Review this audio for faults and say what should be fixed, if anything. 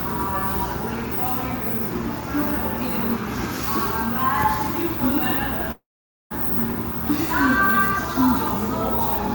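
A long network dropout runs from 5.71 to 6.32 s. The sound continues as a fading buzz, then goes silent for about 0.49 s, and roughly 0.6 s of material never returns. A likely cause is the receiver concealing missing packets until it gives up. On a spectrogram, smeared repeated bands fade into an empty gap, and the waveform collapses to a flat line. A larger jitter buffer, a more reliable link, or forward error correction would prevent it.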